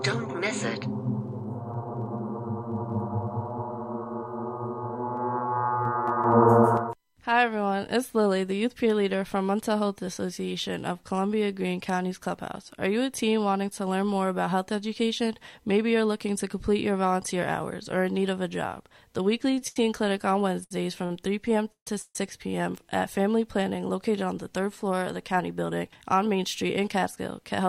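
From 19.50 to 19.77 s, repeated stalls (stutter) break the sound four times. Late packets left the jitter buffer empty, and about half that span is filled-in continuation, with the longest hold 80 ms. Unlike a single stall, it drags unevenly.

At 20.64 s and 21.06 s, a short stall from a late packet stretches the last sound by 68 ms and then 45 ms. Each is a single held moment with a slight buzz or dip, and the audio resumes where it stopped.

From 21.72 to 21.88 s and from 22.02 to 22.16 s comes a call audio freeze, likely caused by packets held up in transit. The held sound fades into silence, 100 ms in the first and 30 ms in the second, which marks these apart from the brief stretches.

From 23.91 s to the end, a jitter buffer speed-up trims tiny pitch-period slices, about 0.3 s in total. The audio runs 6% faster at unchanged pitch and sounds hurried rather than stalled.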